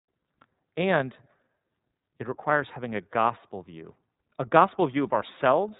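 From start to finish the speech carries iLBC codec damage, plainly audible: a rough, slightly synthetic quality, with each 30 ms frame's excitation coded independently. A spectrogram shows an empty band above 4 kHz, and the grain fits the 13.33 kbps mode.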